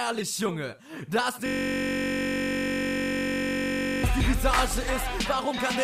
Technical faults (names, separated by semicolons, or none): system hang loop